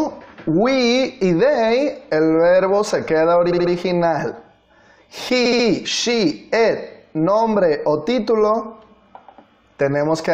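A stutter at 3.50 s repeats the same short stretch of audio, and the sound jumps back on itself until 3.70 s. The same stutter returns from 5.45 s to 5.65 s. Both are repeated frames: a block of about 70 ms, which fits a run of three compressed frames, was written or sent again and played three extra times. Each event adds 209 ms that was never in the original.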